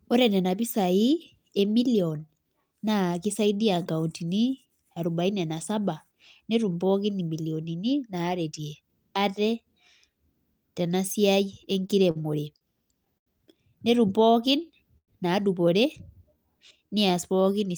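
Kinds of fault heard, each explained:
Repeated stalls (stutter): From 11.63 to 13.28 s, just after "tena siai", playback halts seven times as packets arrive too slowly to keep the jitter buffer fed. Each pause is bridged by extending the last sound, the longest about 84 ms, adding roughly 210 ms in all, about 13% of that stretch. Nothing is lost, but the speech drags and catches in a broken rhythm.
Jitter buffer slow-down: Twice the receiver stretches the audio to rebuild its reserve, repeating single pitch periods so the speech runs slower at unchanged pitch. From 14.07 to 14.84 s it plays at 94% speed, adding 55 ms. From 16.18 to 17.12 s it drops to 90%, adding 101 ms. Both passages sound drawn out, with sounds lengthened rather than lowered.
Call audio freeze: At 14.98 to 15.10 s the audio stops briefly and resumes where it left off, most likely because packets were held up in transit and the jitter buffer ran dry. 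About 100 ms is filled by continuing the last sound, which fades to roughly 80 ms of silence before playback restarts. Nothing is missing. The gap pushes the rest of the audio about 100 ms later.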